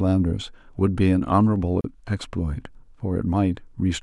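At 1.81 s the speech drops out for about 34 ms, ending at 1.84 s, a gap at a join of encoded pieces. The audio appears to have been encoded in 2 s segments and joined without trimming, so one segment's padded final frame and the next segment's encoder start-up delay both remain as dead air. The silence cuts in and out with edges softened by the codec, and the speech resumes exactly where it stopped.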